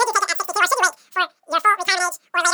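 Throughout, a wrong sample rate makes speech 2.76 times faster and 17.6 semitones higher together, unlike a pitch shift, which fits 16 kHz audio played at 44.1 kHz.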